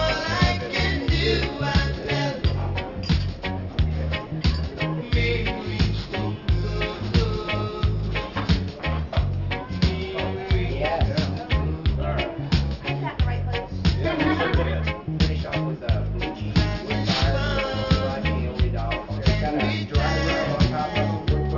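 Aliasing runs throughout. The sound was downsampled without an anti-aliasing filter, apparently to a 12 kHz rate, so energy above 6 kHz folds back as unrelated tones about 15 dB down, turning high detail gritty and metallic. A spectrogram shows dense energy up to a hard 6 kHz edge, with mirrored streaks below it.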